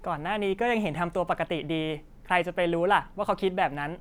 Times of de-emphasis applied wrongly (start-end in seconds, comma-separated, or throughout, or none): none